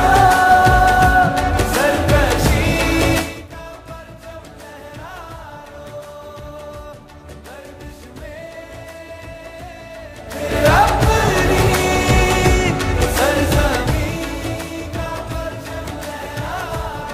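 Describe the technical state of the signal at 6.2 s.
At 6.2 s the signal is intact, with no audible fault at that moment.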